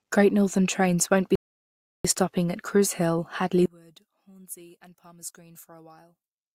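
At 1.35 s the player runs out of buffered audio and halts until more data arrives, a rebuffering stall. After "trains won't be" the speech drops to dead silence, then picks up at 2.05 s with "stopping at", continuing exactly where it left off. No speech is skipped or repeated; the stall simply inserts about 0.69 s of silence, stretching the sentence with an unnatural pause.

From 3.66 s to the end, the sound points to one channel inverted, a stereo channel most likely flipped in polarity. When the channels are combined to mono, everything common to both cancels, so the centred speech collapses by about 24 dB. What remains is only the small difference between left and right, a faint residue of the voice in place of its full body.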